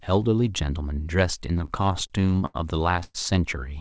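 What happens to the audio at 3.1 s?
From 3.04 to 3.17 s there is a call audio freeze: the last sound is stretched into a fading buzz for about 110 ms, then about 10 ms of silence. Packets were likely delayed until the jitter buffer ran dry. Playback then resumes where it stopped, now 109 ms late. On a spectrogram the last spectrum smears into flat horizontal bands that fade before a thin blank strip, all below the 8 kHz G.722 ceiling. The waveform shows a decaying repetitive stretch.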